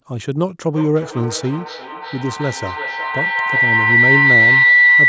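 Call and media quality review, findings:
Feedback howl, 0.71 s to end of clip. Tone around 2 kHz, swelling rather than decaying, pulsing roughly every 0.4 s. Peaks about 7 dB above speech. Probable component: two devices sharing a room on one call. Each trip adds gain.

Call microphone processing path audible, with content ending at 8 kHz.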